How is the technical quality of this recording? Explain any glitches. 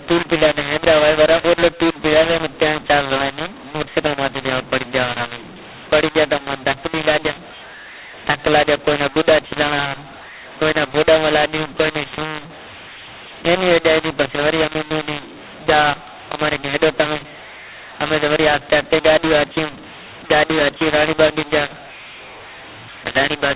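The quality is poor throughout. The telephone-band sound, with nothing above 4 kHz, is expected for G.711 coding, but the samples are decoded with the wrong law. The speech was coded as A-law and decoded as mu-law, the two companding laws mixed up, for the whole clip. The two logarithmic scales assign different levels to the same 8-bit codes, so amplitudes come out scrambled: some too loud, some too soft, and near-silent samples pushed well above zero. The speech sounds harsh and gritty, and pauses fill with hiss. Unlike ordinary clipping or added background noise, the distortion is present at every level and the noise floor rises in the gaps between words rather than sitting steadily under the signal.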